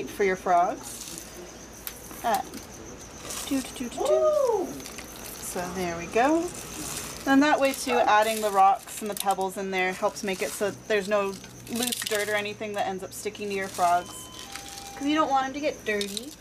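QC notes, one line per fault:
No faults found. Nothing in the audio calls for a QC entry.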